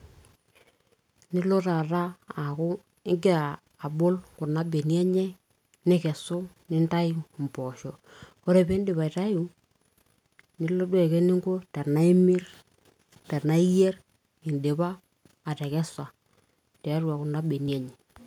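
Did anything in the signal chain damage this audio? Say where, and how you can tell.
No, nothing along the way seems to have damaged this speech recording, so there's nothing to trace back to any stage of the chain.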